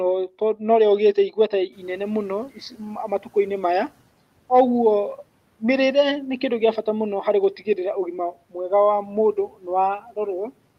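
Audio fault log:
1.72 to 3.89 s, noise suppressor catching up: the room noise jumps by about 15 dB at around 1.5 s, and the suppressor is caught on its old, quieter estimate. For a moment the noise comes through with less reduction, then it sinks over roughly 2.17 s as the estimate climbs to meet the new level, ending up about 9 dB down. You hear the background swell and then slowly get pulled back under the speech.
2.55 to 2.80 s, speech cut by the noise suppressor: right in the middle of that adaptation, the suppressor mistakes some of the speech for noise and turns it down with the background, by about 10 dB at the deepest point. Only around a tenth of a second is actually hit, but it's enough that a soft bit of the talking comes out swallowed and faint, as if it ducked away from the mic for an instant.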